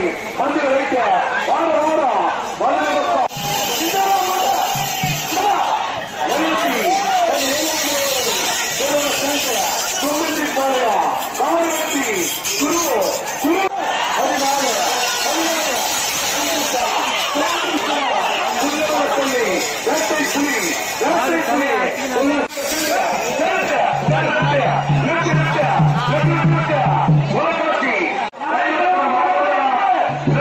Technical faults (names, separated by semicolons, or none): none